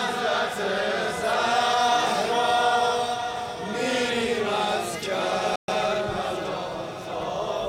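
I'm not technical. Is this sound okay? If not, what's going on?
No. At 5.56 s the sound cuts out for about 0.12 s, then resumes. That's a playback stall, likely the player briefly running out of data.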